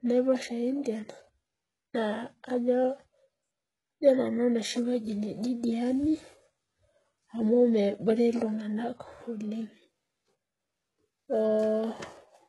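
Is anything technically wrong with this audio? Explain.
Yes, there are two faults. Throughout the speech the sound is heavily coded and nothing is present above 11.5 kHz. This is likely HE-AAC compression at a very low bitrate, around 12 kbps. Only the lower band is truly coded. The treble is copied up from below, so s sounds come out gritty and metallic.

From 9.11 s to the end, just after "amu nebore iltunganak", there is periodic clock jitter at about 1 kHz. The converter clock wobbles at that rate. This puts sidebands around every component and adds a rough, metallic edge to the speech.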